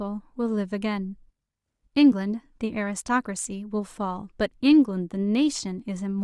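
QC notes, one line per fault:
Nothing stood out on listening to the speech in this clip.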